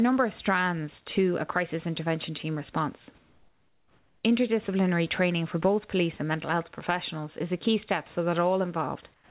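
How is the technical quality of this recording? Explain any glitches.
The speech is band-limited, with nothing above 4 kHz from the call path, and the background is twice swapped for comfort noise.

From 3.18 to 4.24 s, after "crisis intervention team response", and from 9.14 s to the end, the background becomes flat, featureless hiss about 6 dB quieter. The likely cause is discontinuous transmission, with the receiver filling the pauses with synthetic noise.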